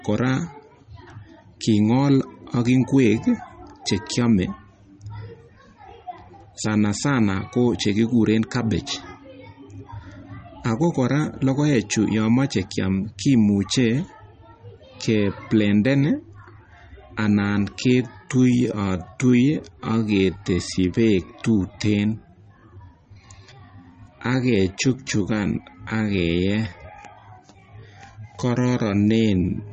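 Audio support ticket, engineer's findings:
MP3 compression, throughout. Watery, swirly texture on the speech; codec damage plainly audible. Nothing above 8.3 kHz, a hard treble cut rather than a gradual roll-off. Likely cause: low-bitrate MP3 encode, consistent with around 32 kbps, where weak frequency lines drop in and out between frames. Unlike a plain low-pass filter, the band-limited sound also warbles and smears attacks.

Time-stretched section, 17.62 s to end (29.73 s). Pace drops abruptly to about 0.72 times normal speed while pitch holds, so speech drags and can sound smeared or doubled. Likely cause: duration-fitting stretch that repeats short pieces to lengthen the audio. Distinguished from slow playback or wrong sample rate by the unchanged pitch; from codec smear by the sudden onset at 17.62 s.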